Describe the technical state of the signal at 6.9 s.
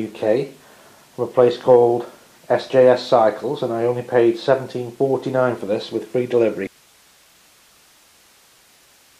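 At 6.9 s there's an audio dropout to a faint residue, likely a break upstream with the following path still live: from 6.67 s to the end, only hiss remains, far below the signal.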